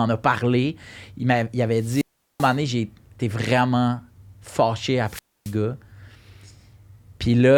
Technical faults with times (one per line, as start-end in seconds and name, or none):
1.76-2.58 wireless microphone squelch dropout
5.05-5.55 wireless microphone squelch dropout